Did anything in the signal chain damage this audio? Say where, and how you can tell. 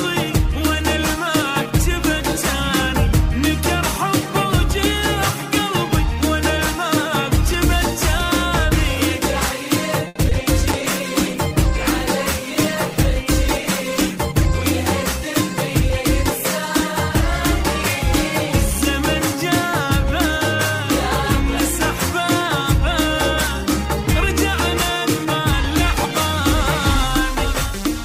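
Yes, the damage sits in the network and call-processing stages of a VoIP path, with four separate faults clustered from about 10 s to 20 s.

At 10.07 to 10.17 s the sound hangs on itself, one moment stretched for 80 ms with a faint buzzy sustain, then carries on from where it stopped without skipping anything. That is a short stall from a late packet. The jitter buffer ran dry, the receiver extended the last sound until the packet arrived, and the playout delay grew by 80 ms.

Just after, at 10.29 to 10.33 s, there is a brief smear followed by a small jump forward, as though a sliver of audio slipped past. This is short concealed packet loss. About 40 ms never reached the decoder, and only 20 ms of synthetic continuation was played in its place before blending back into real audio. That pulled the delay down slightly, which is why content is lost here rather than merely held.

From 10.73 to 14.58 s the sound turns rough and dull, with the top end cut back and a watery coarseness throughout. 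It clears only after that point. This is a call bitrate drop at the codec stage. The bandwidth estimate fell and the encoder went from 96 kbps to 24 kbps, staying at that floor for 3.78 s. At such a low rate Opus both quantises coarsely and trims the high frequencies.

From 14.15 to 20.03 s the audio runs very slightly fast, at 101 % speed, with no pitch change, too slight a speed-up to sound hurried. This is a jitter buffer speed-up. With the buffer holding more audio than it aims for, the receiver shed about 50 ms in total by cutting out many tiny pitch-period-sized pieces in succession.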